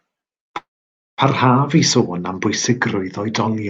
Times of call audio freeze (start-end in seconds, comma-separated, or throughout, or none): 0.57-1.20